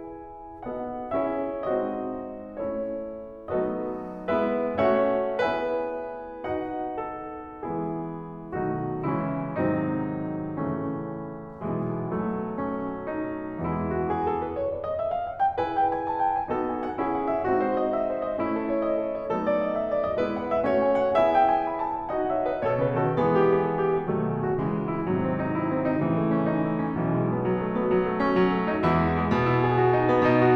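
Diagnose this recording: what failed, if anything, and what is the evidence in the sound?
Nothing failed in this music recording, and the sound gives no evidence of a fault at any stage.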